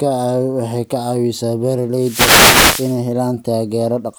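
From 1.92 s to 3.02 s the speech is hit by a wireless microphone noise hit lasting about 1.1 s: the FM radio link fades as reflected signals cancel, so receiver noise rises into a swish of static, breaking into clicks where the fade deepens and masking the voice.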